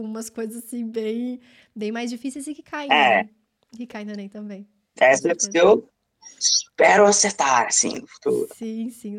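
A speech clip with a brief jumbled moment at 7.95 to 7.97 s, just after "eu espero acertar". These are chunks out of order: one 10.7 ms chunk arrived a chunk late and played after its successor, so the swapped order creates hard joins.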